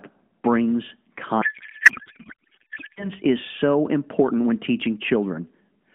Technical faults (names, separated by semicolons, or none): codec payload misread